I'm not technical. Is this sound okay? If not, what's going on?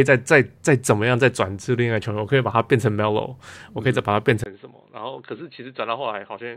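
No. At 4.44 seconds there is a tiny gap, and the speech turns muffled, quieter and slightly noisier until the end. This is likely an input switched to a poorer device, such as another microphone, which loses everything above 4.2 kHz.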